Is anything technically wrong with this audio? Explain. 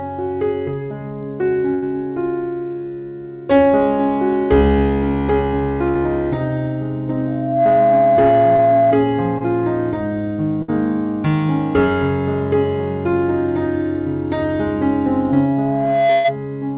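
Yes. There are three kinds of fault, heard over audio that stops at 4 kHz, which fits a narrowband G.711 telephone codec.

Burst of packet loss at 1.74 to 1.84 s, 5.88 to 5.97 s, 10.62 to 10.70 s and 16.12 to 16.26 s. A run of packets never arrived, so the receiver stretched the last sound for about 60 to 120 ms, fading it into a held buzz or hiss. The audio then picks up further along, with that stretch missing. The length of the hold and the skip are what set it apart from the brief concealments.

Loudspeaker feedback squeal from 7.27 to 9.07 s and again from 15.28 to 16.36 s. The microphone was re-capturing its own loudspeaker, and at 678 Hz the loop gain went above one, so that tone fed on itself. It swells over roughly 0.4 s the first time and about a second the second time, ending up roughly 5 dB above the sound. Unlike a concealment buzz, it is a steady pitch that grows rather than fades.

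Short concealed packet loss at 8.57 to 8.60 s, during the first squeal, and at 9.38 to 9.42 s. About 20 ms of audio went missing each time. The decoder bridged the gap by extending the previous sound and then blending back in, which leaves a tiny smear or wobble rather than an audible hold. These repairs last only a few hundredths of a second, which is what distinguishes them from the bursts.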